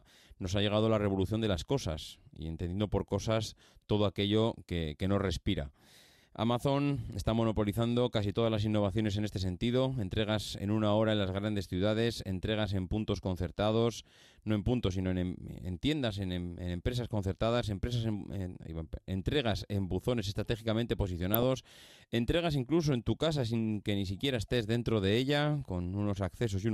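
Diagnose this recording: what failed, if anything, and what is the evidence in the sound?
Codec stage, on a weak DAB feed: two short bursts of DAB burbling, 21.34 to 21.43 s and 23.21 to 23.26 s, over the speech. Roughly 0.2 percent bit errors got past error correction, corrupting MP2 audio data so short noise blips appeared in single sub-bands.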